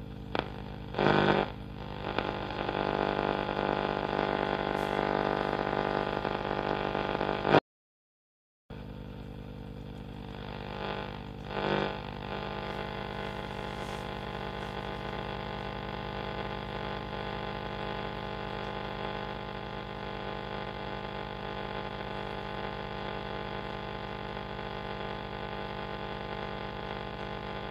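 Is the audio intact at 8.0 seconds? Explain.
No. At 8.0 s the clip is inside an audio dropout to silence running from 7.59 to 8.70 s, about 1.1 s of lost sound. The input was likely disconnected or muted while the recorder kept writing silence, so the sound cuts off abruptly and returns mid-flow. Unlike a quiet passage or a fade, the gap is silent. The steady 60 Hz mains hum, present throughout at about 15 dB below the signal, is also a fault at this moment, and no room tone is left in the gap.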